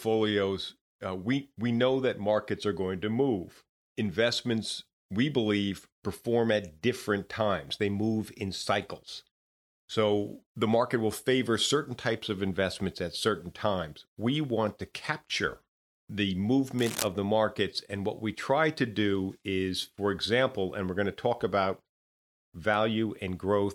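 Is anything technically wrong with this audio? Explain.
Yes. From 16.78 to 17.08 s, cable scratch noise: uneven scratching just below speech level, likely a moved worn connector whose contact resistance fluctuated.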